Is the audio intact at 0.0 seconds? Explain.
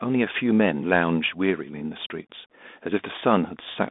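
No. At 0.0 s the speech is already passing through a Bluetooth CVSD headset codec, which affects the whole clip. CVSD sends one up-or-down bit per sample with an adapting step, consistent with a 64 kbps stream, so sharp rises outrun the step and smear, s sounds turn scratchy, and a grainy hiss sits underneath. A spectrogram shows energy confined to roughly 200 Hz to 3.6 kHz with a speckled noise floor. The waveform shows rounded, slope-limited edges.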